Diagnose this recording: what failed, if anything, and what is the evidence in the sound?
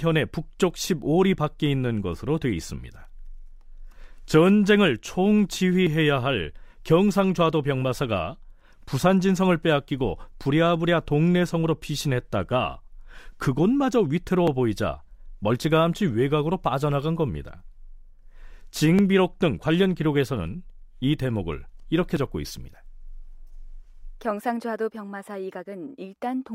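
The speech jumps abruptly four times, at 5.87, 14.48, 18.99 and 22.17 s. Each is a small skip forward with no gap of silence. The first, second and fourth lose about 10 ms. The one at 18.99 s loses roughly twice that. The failure is likely a dropped buffer (overrun) in the driver or buffer stage. The software failed to read the samples in time, the hardware overwrote them, and the surviving audio was spliced together.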